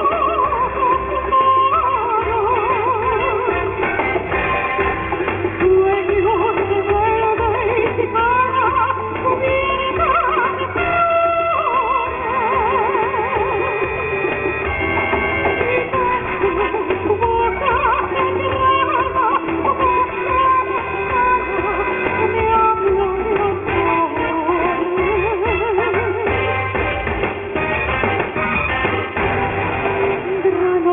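From start to end the audio carries aliasing. The sample rate was cut without an anti-alias filter, which fits a drop from 48 kHz to 6 kHz, so energy above 3 kHz folded back below it as unrelated, inharmonic tones, roughly 10 dB under the wanted signal. High detail sounds gritty and metallic. On a spectrogram, content runs hard up to a sharp 3 kHz ceiling, with mirrored partials sweeping in the wrong direction.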